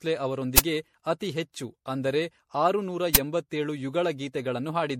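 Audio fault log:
throughout: generation loss. The speech sounds swirly and hollow, with a watery smear on sibilants and softened consonant attacks, and nothing is heard above 16.5 kHz. The damage is heavier than one MP3 pass would leave; the likely cause is the audio being decoded and re-encoded with MP3 about seven times, at a rate that sounds like roughly 64 kbit/s. Each pass quantises again on a shifted frame grid, so the noise and spectral holes build up.
0.58 s and 3.15 s: uninitialised buffer. Each event is a sudden, loud burst of harsh digital noise lasting about 10.7 ms. The length fits a 512-sample block being played out before any audio was written into it. Whatever data was left in that memory was sent to the output as if it were samples.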